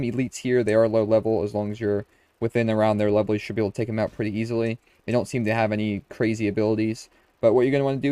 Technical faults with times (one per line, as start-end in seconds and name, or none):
none